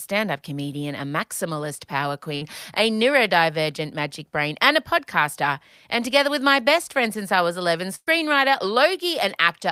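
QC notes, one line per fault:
2.35–2.43 s, burst of packet loss: after "comedian a maximalist power", about 60 ms of speech drops out. The receiver stretches the last sound over roughly 57 ms and fades it, which gives a brief held buzz or hiss. The audio then jumps ahead to "a neurodivergent magic brain".
7.95–8.09 s, burst of packet loss: a longer gap of about 120 ms. The concealment extends and fades the preceding sound for about 115 ms, ending in about 40 ms of silence before the speech resumes further on.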